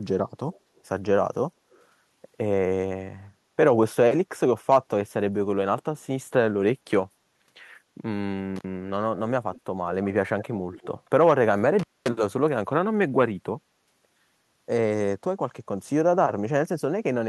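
Faint, delayed ghosts of the speech trail behind it at 0.52 to 0.60 s, 0.76 to 0.81 s and 1.71 to 1.84 s, each arriving 223 ms late and sitting well below the direct sound. This is likely echo leak: a far-end loudspeaker's output reached its microphone, slipped past the echo canceller and returned down the line. At 8.56 s the audio drops out for about 55 ms with crackle at both edges and faint hiss in the gap, the mark of an intermittent contact, where a loose plug or cable briefly opened the circuit. The echo leak returns at 9.54 to 9.61 s, 10.39 to 10.56 s and 10.73 to 10.87 s, now 197 ms behind the speech and louder than before, most prominently in the middle scrap. A longer intermittent contact dropout follows from 11.79 to 12.09 s, with the line open for about 230 ms between crackling edges.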